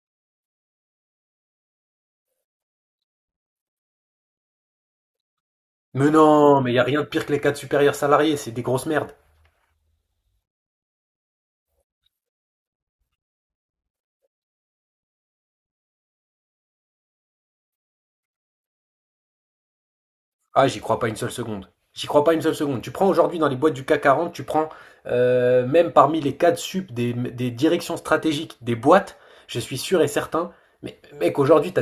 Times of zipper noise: none

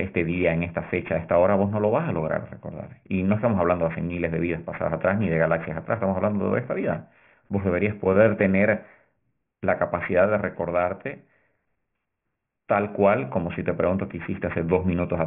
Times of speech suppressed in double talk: none

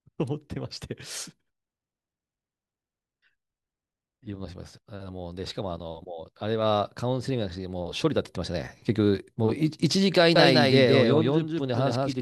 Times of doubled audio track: 10.36-12.22

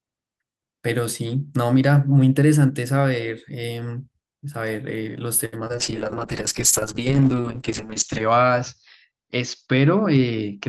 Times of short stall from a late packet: 5.45-5.54

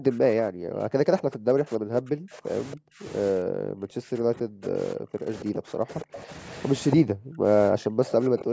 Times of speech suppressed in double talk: 0.00-3.04, 3.32-6.30, 6.95-7.46, 7.71-8.53

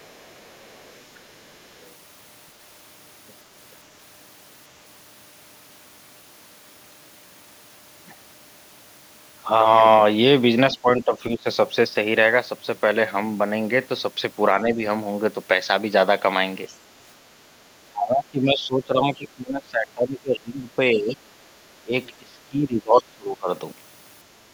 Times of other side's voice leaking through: 0.00-1.17, 1.80-1.87, 16.67-16.74, 22.97-23.02

